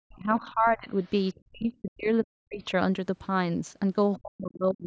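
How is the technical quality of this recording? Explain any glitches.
Technical quality is hurt by call echo handling: the talker gets ducked hard in three places, and a faint second voice slips through twice. It's clearly gone through call microphone processing, with nothing above 8 kHz.

Speech suppressed in double talk shows up from 0 to 0.89 s, from 1.36 to 2.63 s, and from 4.17 s to the end. The voice sinks by as much as about 40 dB, for around three-quarters of a second in the first and last spans and about a second in the middle one. The likely cause is both ends talking at once, so the echo canceller couldn't tell its own talker from loudspeaker echo and pulled everything down.

The other side's voice leaking through appears at 1.03 to 1.11 s and 1.28 to 1.34 s. These are brief scraps sitting roughly 35 dB under the main speech. The likely cause is the far end's audio playing on the talker's loudspeaker, getting picked up by the microphone, and not being fully cancelled, so short fragments get through.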